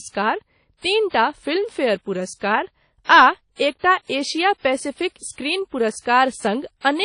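Across the whole speech clip the sound is smeared, with a ringing, washy quality and a hiss that swells and fades with each syllable, the signature of WMA compression. Nothing remains above about 10.1 kHz. The encoder likely used long transform blocks, so quantisation noise spreads over tens of milliseconds, and it zeroed weaker spectral lines, which fits a low bitrate near 32 kbps. Unlike a plain low-pass filter, the damage also reaches inside the remaining band as breathing noise.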